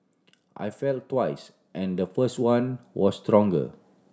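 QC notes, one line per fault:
0.32–3.72 s, automatic gain rising: the gain control judged the input too quiet and ramped up about 11 dB, so speech and background swell together.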